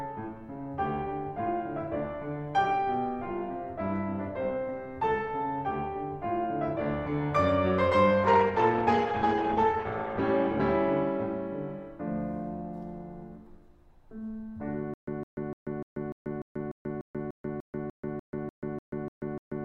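Music, with two separate faults. From 8.28 s to 10.33 s a call bitrate drop hits: the encoder falls from 64 kbps to 15 kbps, staying at the bottom for about 1.9 s, and the audio bandwidth shrinks from 20 kHz to 8 kHz. The music turns dull and grainy, then recovers. Unlike a plain low-pass filter, the coarse, watery coding texture arrives together with the lost treble, and unlike packet loss there are no gaps or clicks. From 14.94 s to the end of the clip comes a stutter with silent gaps. A 160 ms fragment of music replays sixteen times, each followed by about 137 ms of dead digital silence, so it repeats every 296 ms. The likely cause is a stalled stream whose player retries by replaying its last buffer and then runs empty. The steady rhythm and true silence between bursts set it apart from a seamless loop or random dropouts, and the music that should have followed is lost.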